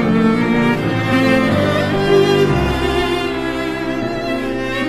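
Compressed frames skipped at 1.12 s and 2.70 s: each time roughly a tenth of a second of audio vanishes, a few 23.2 ms frames, so the sound jumps ahead.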